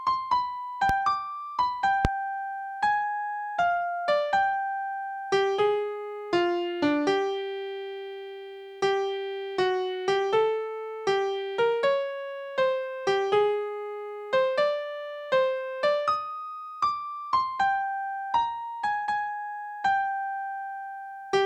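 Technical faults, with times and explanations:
0.89–0.93 s and 2.05–2.08 s, loud pop: two single sharp pops, roughly 15 dB and then 20 dB above the surrounding sound, which continues underneath. A sudden voltage step or pulse entering the signal, likely from a plug, switch or static discharge, would sound like this.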